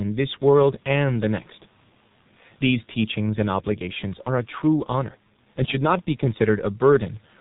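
Speech runs through the G.723.1 codec from start to finish, sounding muffled and hoarse, consistent with roughly 6 kbit/s; a spectrogram shows nothing above 4 kHz and blurry 30 ms blocks.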